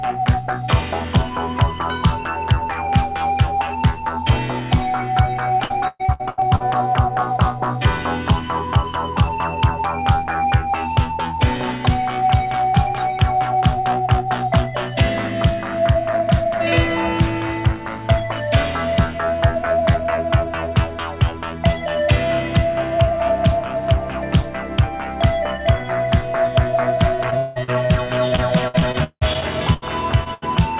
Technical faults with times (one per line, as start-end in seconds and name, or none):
5.64-6.62 repeated packet loss (robotic sound)
27.30-27.92 repeated packet loss (robotic sound)
28.28-29.84 repeated packet loss (robotic sound)
30.24-30.28 short concealed packet loss
30.34-30.44 burst of packet loss